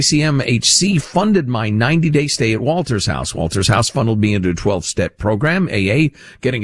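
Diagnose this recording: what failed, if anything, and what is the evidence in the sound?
No fault detected here.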